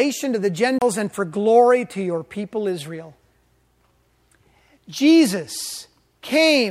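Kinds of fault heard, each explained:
CD skip: the laser lost its place on the disc's spiral track and landed on a different turn, so playback dropped out briefly and resumed from somewhere else. In this speech clip it shows at 0.79 s, just after "to the": a mute of roughly 30 ms, then the audio picks up abruptly at "and for glory to", with a jump of one or more disc turns rather than a smooth continuation.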